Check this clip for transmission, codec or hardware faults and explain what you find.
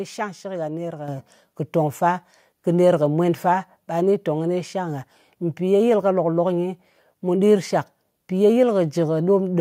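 There's one fault here: the microphone volume stepped up at about 1.08 s. The call software evidently judged the input too quiet and raised the device's input gain in a single jump of about 7 dB. Since that happens before the signal is encoded, everything rises together. The speech and the background noise both get abruptly louder at the same instant. It's a clean step with no fade, and it stays at the new level from there on.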